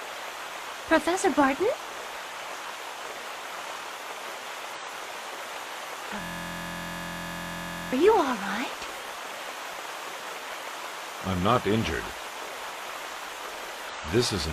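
At 0.75–0.80 s and 4.74–4.80 s, damaged data in the compressed stream makes the decoder lose frame sync, giving brief glitches. From 6.21 to 7.93 s, a system hang loop repeats one 23.22 ms segment, which fits a 1024-sample buffer, producing a steady 43.1 Hz buzz. Another compressed-stream corruption blip occurs at 13.89–13.95 s.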